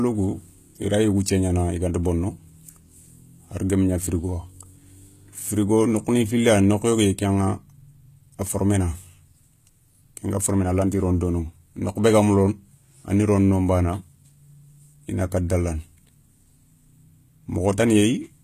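Speech throughout, with treble that sounds bright but synthetic: sibilants come out gritty and lispy, with a metallic sheen, and nothing is present above about 14.9 kHz. The likely cause is HE-AAC compression at a low rate, around 20 kbps, where the upper band is rebuilt from copied lower bands instead of coded directly.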